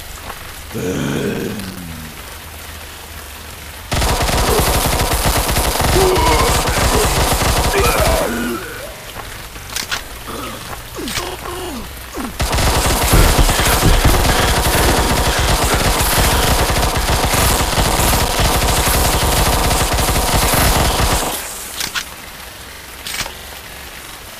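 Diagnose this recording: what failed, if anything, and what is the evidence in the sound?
Buffer-stage processor overload crackle at 1.34–1.81, 4.80–5.96 and 17.51–18.36 s: dozens of few-millisecond buffers missed their deadline, each leaving a hard-edged silent gap.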